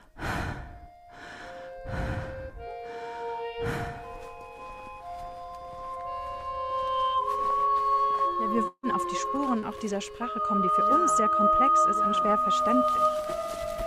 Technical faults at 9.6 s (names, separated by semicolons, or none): short concealed packet loss